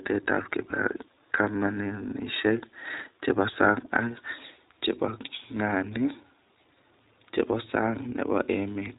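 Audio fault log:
throughout, iLBC codec: nothing above 4 kHz, and a plainly rough, synthetic edge from coding each frame alone, which fits 15.2 kbps with 20 ms frames.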